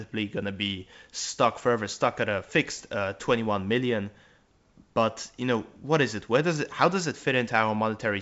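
Nothing here goes wrong at any point; it's ordinary G.722 wideband telephone speech at 64 kbit/s, with the top of the band tapering off by about 7.7 kHz as that coding would have it.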